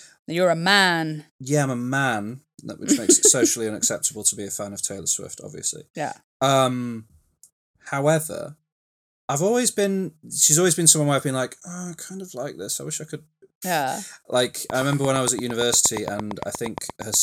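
A speech recording where something, likely interference from nearby equipment or a faulty connection or power supply, injects a train of clicks from 14.7 s to 17.15 s: roughly twenty evenly spaced ticks at 8.61 per second, peaking around 10 dB above the speech.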